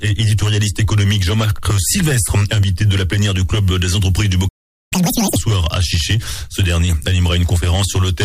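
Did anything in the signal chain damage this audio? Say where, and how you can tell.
Yes. The fault is at the playback stage: a playback stall. The audio cuts to silence at 4.48 s and stays silent until 4.93 s, a gap of about 430 ms, then resumes where it stopped. The likely cause is the player's buffer running dry or its output thread being blocked.

Right after the gap, from 4.93 to 5.36 s, there is a catch-up at higher speed. The sound runs at twice normal speed, with pitch raised by roughly ten semitones, then returns to normal. The player is resampling its backlog to recover the lost time.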